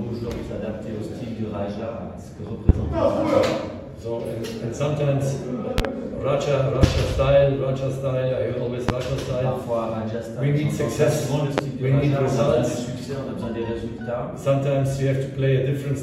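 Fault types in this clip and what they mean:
Loud pop: A sudden voltage step or pulse, likely from a plug, switch, static discharge or driver glitch, enters the signal path and is shaped by the circuitry that follows. It sounds like a sharp pop standing roughly 20 dB above the surrounding audio, which carries on underneath. Single pops land at 2.69, 6.83, 8.89 and 11.58 s, and a quick double pop occurs at 5.78 s, lasting about 0.1 s.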